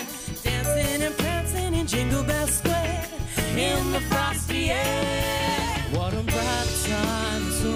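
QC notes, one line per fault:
Nothing stood out on listening to this clip.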